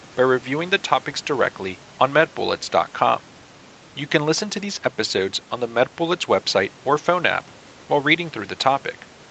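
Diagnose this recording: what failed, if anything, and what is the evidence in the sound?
Nothing failed; every stage of the signal chain is working.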